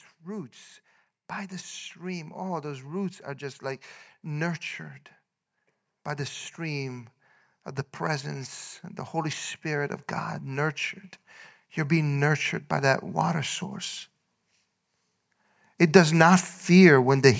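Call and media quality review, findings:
Automatic gain rising, 1.97–4.59 s after "roots by the", and 6.15–8.61 s before "and the". Speech and background swell together, about 5 dB then about 4 dB. Probable component: AGC judging input too quiet and ramping gain up over roughly 2.5 s.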